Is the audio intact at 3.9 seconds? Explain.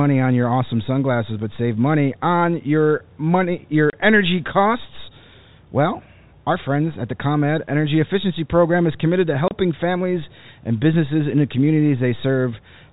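No. From 3.90 to 3.93 s, a packet of speech failed to arrive and the receiver filled the hole with silence. The speech drops out for 30 ms, which fits a single lost packet, with abrupt edges on either side of the gap.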